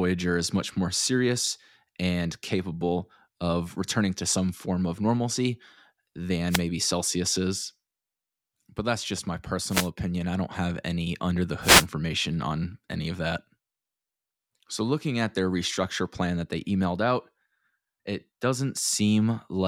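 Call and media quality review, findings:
Wireless microphone noise hits, speech, at 6.49–6.62 s, 9.68–9.89 s (after "that's just my") and 11.61–11.87 s (before "on any of that"): brief static swishes as the FM radio link fades. Spectrogram shows broadband noise bursts.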